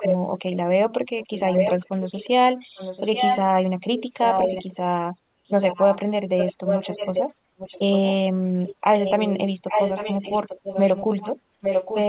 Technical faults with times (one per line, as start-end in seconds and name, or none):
0.00-0.17 echo leak
1.20-2.30 echo leak
2.75-3.40 echo leak
3.97-4.76 echo leak
5.48-5.99 echo leak
6.37-7.23 echo leak
7.58-8.14 echo leak
8.65-12.09 echo leak